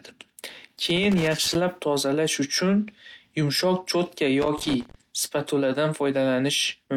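Loose connector crackle breaks into the speech from 0.90 to 1.56 s and again from 4.42 to 4.95 s. A worn contact makes and breaks the signal path, so both bursts sound like irregular scratchy crackle.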